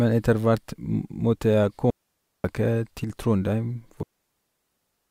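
Digital wireless dropout at 1.90 to 2.44 s: the receiver mutes after losing too much data, leaving a clean 0.54 s hole with no noise burst either side. One channel drops out at 3.04 to 3.10 s: the sound abruptly falls about 6 dB for this brief stretch, likely from one stereo channel vanishing before the mono sum. The digital wireless dropout returns at 4.03 s, muting for 1.08 s through to the end of the clip.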